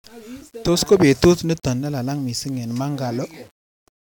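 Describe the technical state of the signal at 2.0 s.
At 2.0 s the speech has the grainy, signal-following grit of low bit depth without dither, and it's there for the whole clip, not just this moment. It's likely down to rounding to about 8 bits, leaving error only about 35 dB under the signal, so quieter parts sound rough and sputtery.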